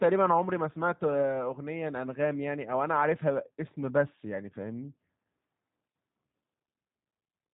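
Throughout the speech, a G.729 codec has rebuilt the signal from a compact model of vocal tract, pitch and sparse pulses, which fits an 8 kbit/s VoIP stream. Nothing above 3.8 kHz survives, so the voice sounds muffled, plainly rough and synthetic.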